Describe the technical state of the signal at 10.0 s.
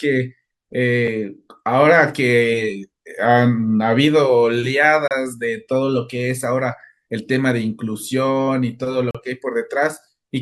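At 10.0 s the speech signal is intact, with no technical fault at that moment.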